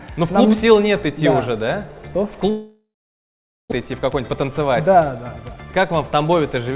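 From 2.5 to 3.74 s the sound breaks off. The last moment smears into a fading buzz, then about 0.83 s of silence follows, and about a second of audio never returns. This is likely a long network dropout. A spectrogram shows a smeared, decaying band, then an empty gap.

From 3.81 to 5.50 s a jitter buffer speed-up catches up on the backlog. The receiver trims tiny pitch-period slices, about 0.2 s in all, so the sound plays at 111% speed with unchanged pitch and feels hurried. The waveform looks compressed in time. The spectrogram bands keep their height but shorten.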